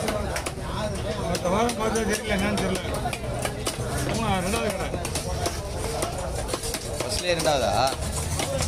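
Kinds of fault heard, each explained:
No kinds of fault are heard in this clip.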